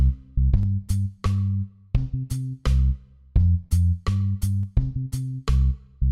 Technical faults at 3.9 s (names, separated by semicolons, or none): periodic USB or driver dropouts